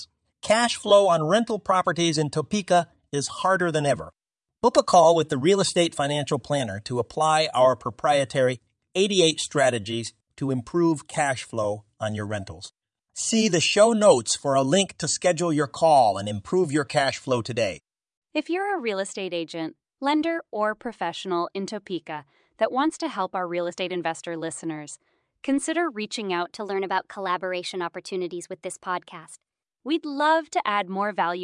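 Speech, with one wrong sample rate fault from 26.45 to 29.72 s. The voice runs 1.09 times fast and about 1.5 semitones high, which fits 22 kHz audio played at 24 kHz.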